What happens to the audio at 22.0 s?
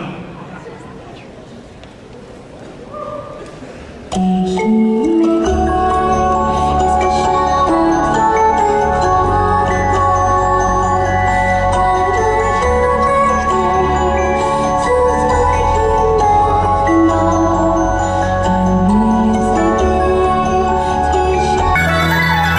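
Wrong sample rate from 21.75 s to 22.58 s: the audio plays at double speed and an octave higher, which fits 24 kHz material run at 48 kHz without conversion.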